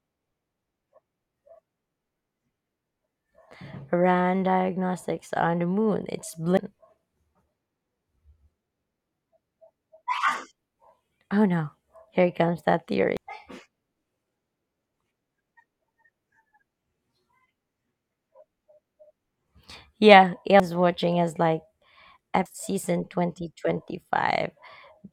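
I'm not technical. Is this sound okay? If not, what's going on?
No. At 6.57, 13.17, 20.60 and 22.46 seconds, the speech suddenly jumps ahead, losing roughly 0.7, 0.4, 0.3 and 0.7 seconds. These are compressed frames skipped: chunks of about 93 ms each went missing or were discarded as damaged.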